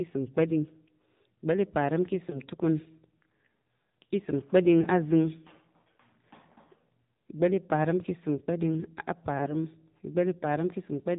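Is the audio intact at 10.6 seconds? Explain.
No. At 10.6 s, as throughout, the speech passes through the AMR narrowband mobile codec, with plainly audible damage that fits a low rate near 7.4 kbps. Rebuilding the voice from a vocal-tract model excited by sparse pulses makes it buzzy and synthetic; a spectrogram shows nothing above 4 kHz.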